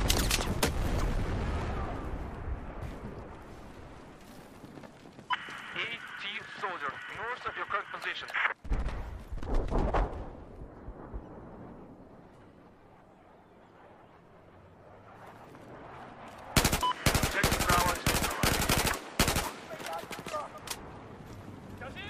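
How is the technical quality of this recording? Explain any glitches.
No glitches can be heard anywhere in the recording, and the signal holds steady and continuous throughout without any audible technical fault.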